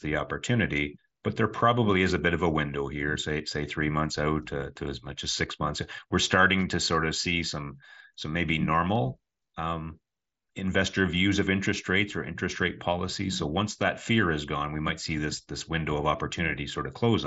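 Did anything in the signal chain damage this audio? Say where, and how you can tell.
Yes. At 8.96 s a single sharp click cuts through the speech, a thin vertical line across the whole spectrum, standing out against the Bluetooth mSBC headset codec's band, which stops near 7.7 kHz. The cause is likely dropped samples at the driver or buffer stage: only a handful of samples, well under a millisecond, went missing, so the waveform leaps straight to a later value. The gap is too brief to erase any sound, leaving just the step's click.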